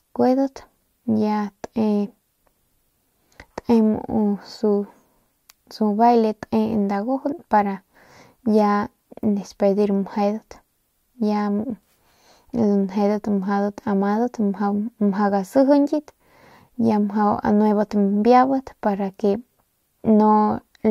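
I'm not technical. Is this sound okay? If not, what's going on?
Yes, nothing in this recording points to a technical problem with the signal itself.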